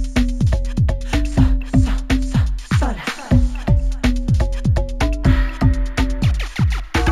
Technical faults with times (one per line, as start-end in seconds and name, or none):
0.00-7.11 imaging from linear upsampling